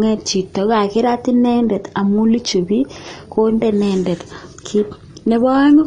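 AAC compression throughout: nothing above 9.7 kHz, with dull, smeared speech and fizzy sibilants, likely from AAC-LC coding at a low bitrate, around 32 kbps.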